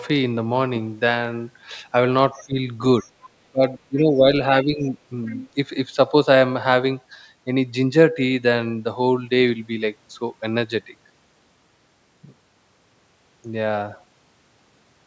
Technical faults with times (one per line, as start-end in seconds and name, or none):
2.34-2.58 speech suppressed in double talk
3.47-4.33 speech suppressed in double talk
4.64-4.92 speech suppressed in double talk
4.86-4.90 other side's voice leaking through
5.25-5.49 other side's voice leaking through